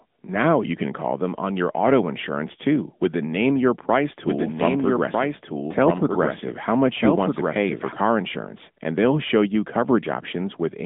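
From start to finish, AMR narrowband mobile codec damage is plainly audible. Nothing passes above 3.8 kHz, and the speech sounds buzzy and synthetic, which fits a mid-rate mode near 10 kbps.

From 4.26 to 7.92 s, a doubled audio track appears. A dry, full-band copy lags about a second and a half, somewhat quieter, likely from a slower second capture path. It begins abruptly just before "car insurance and they'll".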